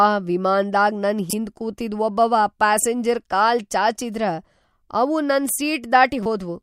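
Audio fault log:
1.30–1.33 s, corrupt frame decoded: flipped bits in one compressed frame reached the decoder, which played it anyway, spreading misplaced energy across wrong frequencies for that frame's length. The result is a sharp squeak or blip, peaking around -5 dBFS.
6.23–6.26 s, corrupt frame decoded: another single damaged frame was decoded, producing a similar short chirp of misdirected energy, somewhat quieter than the first.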